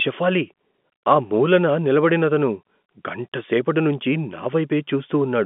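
No technical faults can be heard in this recording.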